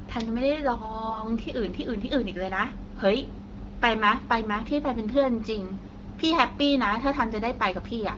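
AMR bit errors occur at 1.10–1.21 s and again at 5.86–5.92 s. Flipped low-priority bits in the wideband frames passed the checksum, so the excitation pulses and the fine pitch, gain and spectral values decode wrongly. The speech keeps its level but briefly turns hoarse and gargly.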